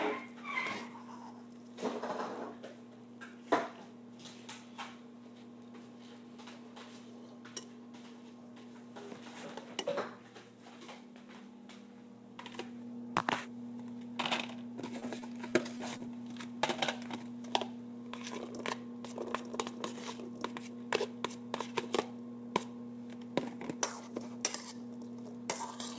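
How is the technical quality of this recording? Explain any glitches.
One stretch of repeated packet loss (robotic sound) stands out, heard over a call path whose band ends at 8 kHz, which fits G.722.

From 15.00 to 16.01 s, five short holes, none longer than about 20 ms, were each patched by extending the preceding sound. The result is a choppy flutter with pieces missing. Unlike a single dropout, the gaps keep recurring, and roughly a tenth of that second is filled-in sound.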